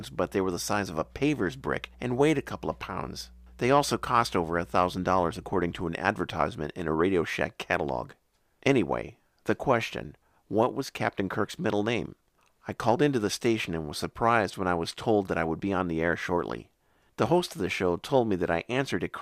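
A steady low tone sits under the speech from the start to 5.81 s, just before "an advertisement in a", well below the speech level. This is mains hum at 60 Hz, where power-line current leaks into the signal through a ground loop or a nearby transformer.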